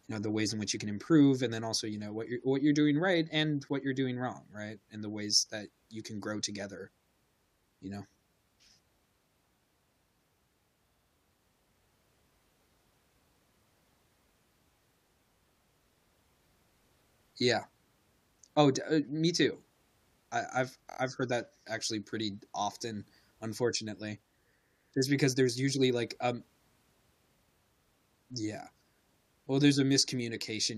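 Speech with repeated frames: a 70 ms block plays three extra times at 10.88–11.09 s, and a 23 ms block plays four extra times at 20.89–20.98 s, between "I I've" and "I've heard that actually". Unlike a dropout, nothing is lost; the same compressed slice stutters and the audio gets longer.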